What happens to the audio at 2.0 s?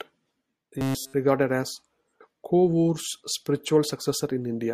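Nothing goes wrong at 2.0 s; the speech carries on intact through that moment.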